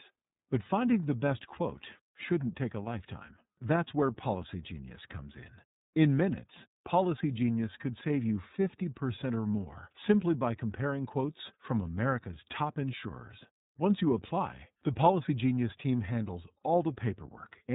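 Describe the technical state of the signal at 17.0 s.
At 17.0 s you're hearing the iLBC codec, same as everywhere else in the clip. Nothing gets through above 3.8 kHz, and since each short frame's excitation is coded on its own, the speech comes out plainly rough and synthetic. That fits the 30 ms, roughly 13 kbps mode.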